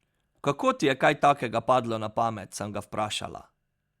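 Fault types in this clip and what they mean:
No technical faults can be heard in this speech recording. There is nothing to list under any fault type.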